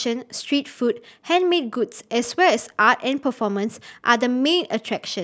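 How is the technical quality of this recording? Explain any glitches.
Nothing jumps out here: the speech comes through steadily, with no glitches to point to anywhere in the recording.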